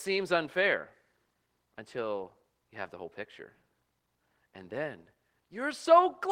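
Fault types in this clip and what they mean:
Nothing stood out on listening to the speech.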